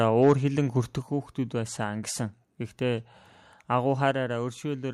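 Speech with microphone overload from 0.23 to 0.33 s. The loudest peaks run about 4 dB past the converter's ceiling, and around 7 percent of samples there are flattened. That gives a harsh, crackly edge. The likely cause is input volume set too high. The microphone volume is stepped down twice. At 1.02 s, just before "хүүхдүүд байсан гэсэн", voice and background fall about 6 dB at once. At 4.11 s they fall about 4 dB. Each drop is likely call software lowering the device's input gain in a single step.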